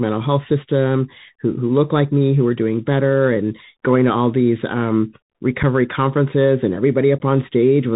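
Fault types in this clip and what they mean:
Bluetooth CVSD headset codec: speech sounds muffled and narrowband, with scratchy s sounds and grainy hiss throughout, from one-bit CVSD coding on a 64 kbps headset link.
Unconcealed Bluetooth headset packet loss: abrupt dropouts near 5.63 s and 7.19 to 7.22 s, where a few lost headset voice packets were replaced with silence or an idle pattern.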